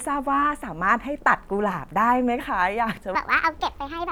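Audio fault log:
3.15–4.11 s: section at the wrong speed. Speech runs 1.55 times fast, rising about seven semitones and hurrying together, unlike a pitch shift. Likely a mismatched playback clock.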